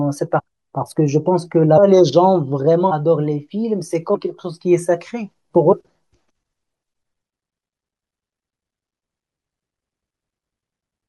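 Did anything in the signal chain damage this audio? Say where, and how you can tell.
Yes, at the codec or storage stage. Compressed frames were skipped at 0.38–0.40, 1.77, 2.9, 4.14 and 5.72 s. Each time the audio jumps ahead by whole 21.3 ms frames, about a third of a second at first, shrinking to about a tenth.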